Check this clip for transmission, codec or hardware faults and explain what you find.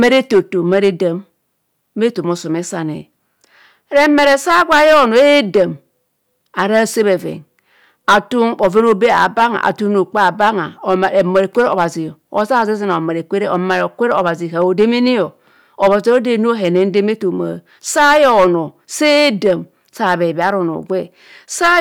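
One fault runs through the whole speech clip: hard clipping. A stage was overdriven by about 11 dB, flattening about 3% of samples, which adds harsh, crackling fuzz to louder syllables.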